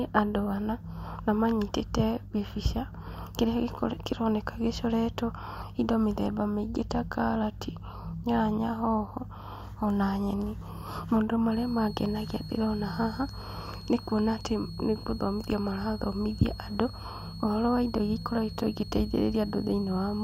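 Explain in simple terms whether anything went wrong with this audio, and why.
A switching supply whistle appears at 11.5 s and lasts to the end. It is a thin, high whine near 4.3 kHz, well below the speech, that wavers slightly. A nearby power supply is switching fast enough to be heard, and its whine leaks into the recording.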